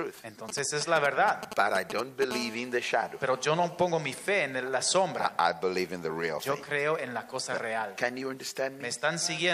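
From 0.49 to 2.24 s come GSM signalling bursts. A nearby 2G phone is transmitting short groups of radio pulses, and the audio circuit rectifies them. The result is a galloping dit-dit-dit of brief 217 Hz buzzes, nearly as loud as the sound itself.

At 2.31 s a steady GSM phone buzz takes over and lasts until 4.33 s. The phone now bursts continuously at 217 Hz, as during a call. The rectified pulses give a hard, raspy, harmonic-rich buzz about 17 dB below the sound.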